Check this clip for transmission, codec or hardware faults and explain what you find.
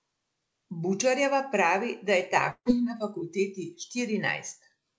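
One transmission fault is audible, a burst of packet loss. From 2.51 to 2.68 s the speech freezes into a stretched, fading continuation of its last sound, drops to brief silence, and resumes with about 150 ms skipped. Several consecutive packets were lost or arrived too late, so the receiver extended and faded the final sound before giving up. The audio travels over a call codec with nothing above 8 kHz, which fits G.722 at 64 kbps.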